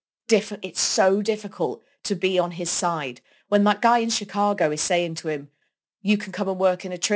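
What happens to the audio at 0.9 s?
At 0.9 s the speech carries aliasing, present throughout the clip. High content was not filtered out before resampling, which fits a drop to 16 kHz, so energy above 8 kHz folds back to wrong pitches roughly 20 dB below the signal. Sibilants turn gritty and metallic rather than merely dull, as plain band-limiting would leave them.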